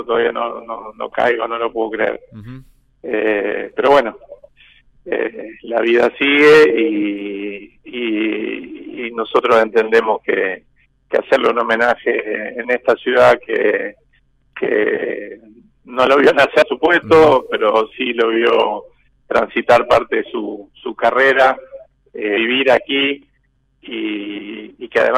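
The audio jumps abruptly at 5.12 s and again at 16.62 s, each time skipping ahead by around a third of a second with the two sides butted straight together. The likely cause is audio missing between chunks: the recorder works in blocks of about 6 seconds and loses a short stretch while handing over from one to the next. No silent gap is left, which separates this from a dropout, where the missing stretch would be heard as a brief hole.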